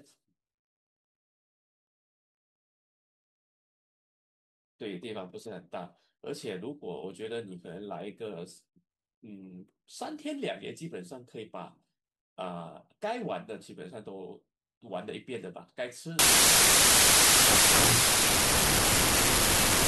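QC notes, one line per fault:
16.19–19.87 s, wrong sample width: from here to the end the speech sinks into loud noise and runs at two-thirds speed, pitch dropped to match. That fits packed 24-bit samples read as 16-bit, so most values mix mismatched bytes.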